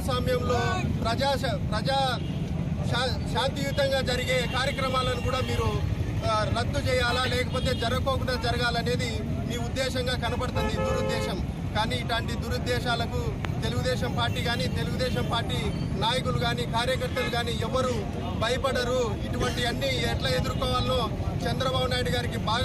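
Two loud pops interrupt the audio, at 4.96–4.98 s and 13.45–13.47 s, the second stronger, peaking roughly 15 dB above the signal against about 10 dB for the first. Each is likely a brief voltage spike from a switch, plug or static. On a waveform they show as narrow spikes, and on a spectrogram as thin full-height vertical lines, with the sound continuing underneath.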